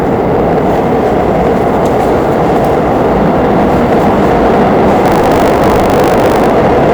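Hard clipping runs through the whole clip. The signal reaches a stage about 9 dB hotter than it can pass, so the peaks are sliced flat, and a sizeable share of the waveform, roughly one part in seven, sits pinned at the limit. Those flat tops throw harmonics high into the spectrum, so every loud moment carries a harsh, fuzzy edge rather than occasional crackle.

From 5.04 to 6.50 s, buffer tearing sets in. The software writing the playback ring buffer and the hardware reading it have drifted until they cross inside each period, so a small slice of every buffer holds audio from a lap earlier, on the order of 70 ms old, butted against current audio with hard joins. Repeating every 20 ms, this produces a steady 50 Hz robotic buzz riding on the sound, which fits a 20 ms buffer period.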